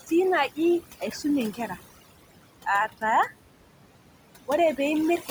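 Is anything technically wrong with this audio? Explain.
Yes. Throughout the clip the background between phrases falls to near silence dotted with twinkling specks. This is overdone noise removal: the reducer was set so hard that any frequency band near its noise estimate is driven almost to nothing, taking quiet parts of the voice along with it.

Alongside that run noise suppressor artifacts across the whole clip. The residual room noise, which sits about 15 dB below the speech, pumps, sinking in the gaps and surging back under each phrase. The suppressor lowers the bands it judges to be steady noise by about 18 dB, frame by frame, so the leftover noise rises and falls instead of holding steady.

There is also speech cut by the noise suppressor, where soft parts of the voice sound swallowed or faint. This happens at 0.01 to 0.11 s (about 13 dB), 0.48 to 0.58 s (about 16 dB), 0.81 to 1.25 s (about 16 dB), 1.52 to 2.46 s (the deepest, about 18 dB, lasting most of a second), and at the very end from 5.18 s (about 9 dB). 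Each time, the suppressor mistook quiet speech for background and turned it down with the noise.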